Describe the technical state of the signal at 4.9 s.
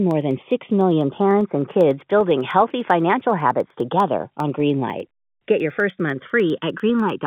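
Around 4.9 s the two channels are drifting apart. They run on clocks that differ by something like 150 parts per million, so the inter-channel delay creeps toward about 0.7 ms by the end. Summed to mono, that sliding delay sweeps comb notches slowly through the speech, giving a slow flanging swirl.

On top of that, 4.9 s falls inside a run of periodic USB or driver dropouts spanning 0.11 to 7.20 s, one every 0.1 s. Each time a fraction of a millisecond of audio is simply skipped, so you hear a steady ticking in the speech, through the otherwise intact telephone-band G.711 sound.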